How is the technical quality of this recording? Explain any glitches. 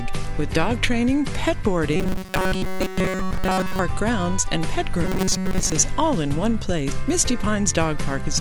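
The recording has a clear fault in two places, from 1.96 to 3.80 s and again from 5.05 to 5.72 s: robotic sound from repeated short buffers. In both spans the audio becomes a rigid, metallic buzz at a fixed 188 Hz that only loosely tracks the original, with most of the material in those stretches replaced. The likely cause is audio arriving too seldom, so a segment of about 5.3 ms (one period of 188 Hz) is replayed to fill the gap while new audio is skipped. Unlike a mains hum, the buzz replaces the content rather than sitting under it, and unlike a pitch shift it holds one rate regardless of the material.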